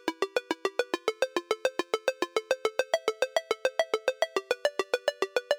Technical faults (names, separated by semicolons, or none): none